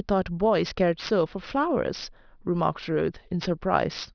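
A speech recording carries aliasing from start to finish. Sibilants sound gritty and metallic because energy above 5.5 kHz has folded back down into the audible band as unrelated tones instead of being removed, and the spectrum runs hard up to that edge. The 5.5 kHz fold point fits a resample from 24 kHz to 11 kHz done without an anti-aliasing filter. The folded components sit around 20 dB below the speech.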